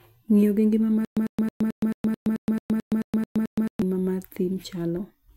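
After "gi ngima", 1.05 to 3.82 s, a 100 ms burst repeats twelve times, separated by 119 ms silences: stutter with silent gaps, likely a stalled stream replaying its last fragment.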